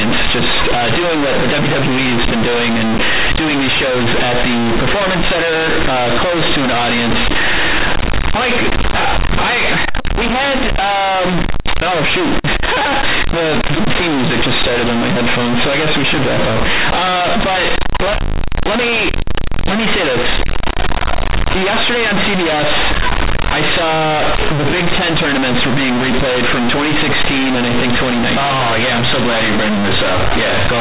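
Throughout the speech, companded audio read as linear 8-bit is heard: the mu-law bytes of what is otherwise a normal 8 kHz telephone path are played directly as sample values, never expanded. Because each sign change flips the output across roughly half its range, soft passages reach the same level as loud ones, and the pauses fill with harsh hiss. Ordinary clipping is confined to the peaks and leaves the gaps quiet, so the loud, buzzy distortion that persists through the silences is what sets this fault apart.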